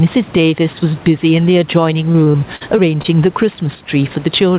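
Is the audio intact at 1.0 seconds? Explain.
No, gain pumping runs through the whole clip, including 1.0 s. The background swells between loud sounds and ducks by around 10 dB under each one, likely from excessive microphone gain driving a fast limiter. On a waveform, the noise floor rises and falls with every loud burst.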